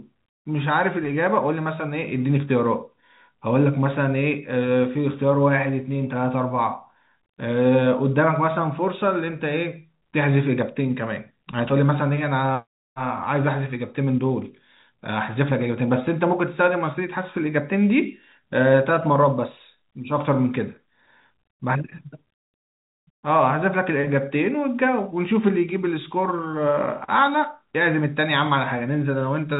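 Nothing is technically wrong with this speech recording. It carries the band-limited sound of G.711 telephone coding, with nothing above about 3.8 kHz and only a faint layer of quantisation noise riding along with the speech.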